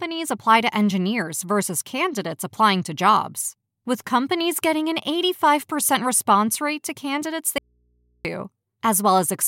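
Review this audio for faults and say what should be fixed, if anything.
An audio dropout to a faint residue cuts the speech abruptly from 7.58 to 8.25 s, leaving only mains hum about 45 dB down. The likely cause is a brief signal loss ahead of a still-live input. On a spectrogram, a sharp vertical edge leaves only thin low hum lines, and the waveform collapses flat. Secure connectors and cables on the input, and monitor levels during capture so a loss is caught immediately.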